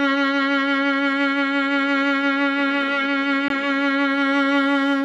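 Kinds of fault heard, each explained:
CD skip: the laser jumps tracks, so the music mutes for about 20 ms near 3.48 s, showing a short flat gap in the waveform, then resumes elsewhere.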